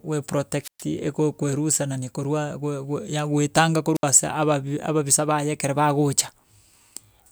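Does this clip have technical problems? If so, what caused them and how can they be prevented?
Yes. Two wireless microphone squelch dropouts, at 0.61–0.85 s (120 ms mute) and 3.95–4.03 s (67 ms, before "ase ababi"): the fading radio signal makes hiss rise before the squelch mutes, unlike a clean digital gap. Keep the receiver within line of sight and range, and use diversity reception.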